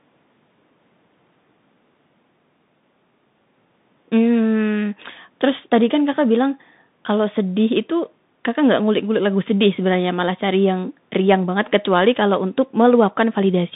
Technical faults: Bluetooth CVSD headset codec

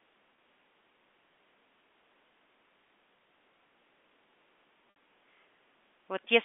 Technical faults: packet loss with pitch repetition

